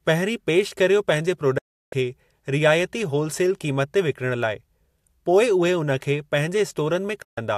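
At 1.58 s, just after "पहिरीं पेश कर्यो पंहिंजे", the speech fades out in about 8 ms and goes silent until 1.93 s. That is a digital broadcast dropout. The receiver stopped getting good frames and muted rather than play damaged data. The hole lasts 0.35 s, which fits roughly fourteen lost frames. A second dropout mutes the speech from 7.22 s to 7.38 s, with the same quick fade. Anything spoken in those gaps is gone.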